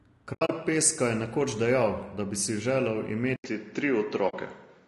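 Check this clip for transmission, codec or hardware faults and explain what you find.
Three kinds of fault are audible in this speech clip. There is codec damage throughout, two muted dropouts, and a change of input near the end.

Low-delay AAC compression runs through the whole clip. The damage is plainly audible. The likely cause is AAC-ELD at a low rate, and the grain fits about 32 kbps. Its short frames resolve the harmonics poorly, so the speech sounds rough and grainy, with noise between harmonics.

AAC frame loss with muting occurs from 0.33 to 0.50 s, just before "peska je nekoč". About 120 ms is missing, scattered over 160 ms, and the longest gap is around 70 ms. A second loss runs from 4.29 to 4.34 s and lasts 40 ms. The decoder zeroed the lost frames, and the overlapping windows fade the sound out and back in. These are soft holes.

The input is switched to a poorer device at 3.36 s, right after "da bi si želel". 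The likely cause is a change to a different microphone or headset profile. An 80 ms silence marks the switch. After it, nothing is present above 7.3 kHz, so the sound turns duller. The level shifts by roughly 5 dB, and a new, faint noise floor sits around 50 dB below the speech.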